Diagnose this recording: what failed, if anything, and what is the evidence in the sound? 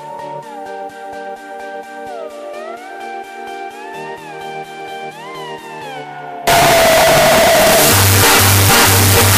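Signed and unsigned mixed up, from 6.47 s to the end at 9.37 s. Here the sound turns abruptly into a loud, harsh distortion in which quiet stretches blare as loudly as the rest. That points to the sample-format conversion stage, likely an 8-bit stream read with the wrong sign convention. The top bit flips, so every zero crossing becomes a leap across the full range.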